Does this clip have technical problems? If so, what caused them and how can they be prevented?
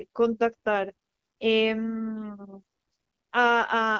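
No, no technical problems here.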